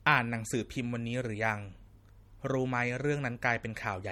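From start to finish, the speech shows the marks of low-bitrate audio saved at a high bitrate. It was likely squeezed through a low-bitrate MP3 encode, with the sound pointing to something near 48 kbit/s, and then re-encoded as a much larger MP3 that could not restore what the first pass discarded. Nothing is present above 18.6 kHz, and the first encode's artefacts remain in the speech despite the generous file size.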